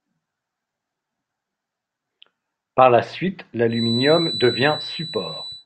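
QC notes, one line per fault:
3.66–5.66 s, feedback whistle: after "la suite", a thin 4 kHz tone sits well below the speech. Likely a loudspeaker-to-microphone loop held at the edge of feedback.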